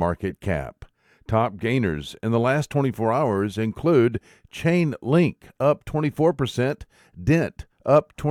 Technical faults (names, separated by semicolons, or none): none